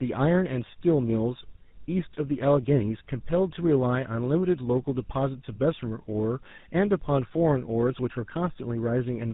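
Tandem speech coding runs throughout the speech, from start to finish. It sounds like two GSM full-rate encodings in a row with a plain telephone link between them. The second coder reworks already damaged speech, leaving it rough, muffled and warbly, with nothing above 3.8 kHz.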